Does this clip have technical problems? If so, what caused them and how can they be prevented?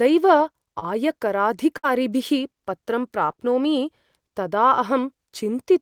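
Yes. Short concealed packet loss occurs at 0.79 s, 3.31 s and 3.35 s: each time about 20 ms of the call failed to reach the decoder, and the receiver patched it by extending the preceding sound before blending back. This leaves a brief smear or wobble, doubled into a slightly longer one where the last two fall back to back. A jitter buffer with more headroom, or forward error correction in the codec, would recover these packets before playback.

A burst of packet loss runs from 1.77 to 1.85 s, where about 60 ms of consecutive audio arrived too late or not at all. The receiver held the last sound and faded it over that stretch, so a buzz or hiss sits briefly in place of speech, and the audio then picks up further on with that portion gone. Reducing network congestion or prioritising the voice traffic, together with redundancy that spans several packets, would prevent losses of this length.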